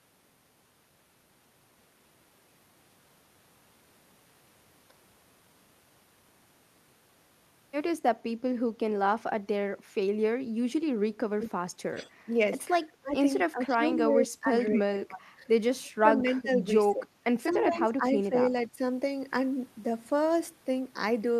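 From 11.29 s to 18.81 s, speech is suppressed in double talk at 11.29–11.61, 11.88–12.3, 12.82–13.16, 13.5–15.54, 15.8–17.09 and 17.49–18.81 s. The talker's level dips by roughly 15 to 25 dB, likely because the echo canceller ducked both sides while the far end spoke. On a waveform these show as sudden notches, and on a spectrogram as faded bands. At 17.51 s a brief echo leak returns a faint copy about 235 ms late, about 25 dB down, likely from residual loudspeaker pickup, visible as a weak repeated smear.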